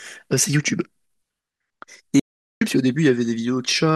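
Audio dropout to silence from 2.20 to 2.61 s: the speech cuts out into silence with no room tone for about 0.42 s, likely from the input link failing while recording continued.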